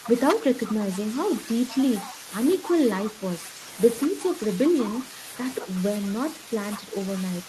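From 0.0 to 0.81 s the speech dips by around 5 dB for about a tenth of a second in all. This is speech suppressed in double talk, likely the echo canceller ducking the talker while the far side spoke. Overlapping this, from 0.04 to 2.14 s, a faint copy of the speech trails 189 ms behind at around 20 dB below it. This is an echo leak, likely loudspeaker pickup that the far end's canceller failed to remove. Between 2.07 and 4.12 s the speech again drops by around 5 dB, totalling about a fifth of a second, from the same likely double-talk suppression. Within that span, brief scraps of the 189 ms echo return at 3.05 to 3.10 s and 4.02 to 4.07 s, each likely leaked residue. From 5.59 s to the end the speech dips by around 5 dB once more, likely suppressed during double talk.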